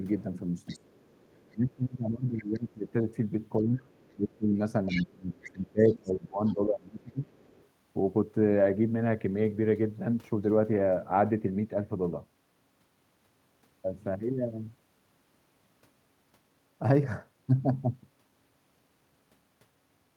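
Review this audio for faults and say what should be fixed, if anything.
Other side's voice leaking through: a faint second voice at 0.19–1.56, 2.38–2.44, 3.91–4.16 and 7.31–7.66 s, much louder at 4.87–6.54 s. It is likely loudspeaker echo the canceller left behind. A better-tuned echo canceller, or a headset instead of a loudspeaker, would stop this.

Speech suppressed in double talk: the talker's voice drops sharply, by roughly 20 to 25 dB, at 0.67–0.96 s and in pieces through 1.52–7.32 s. This likely happens because the canceller turns everything down while both sides speak at once. Improving double-talk detection so the near-end voice is kept during overlap would prevent it.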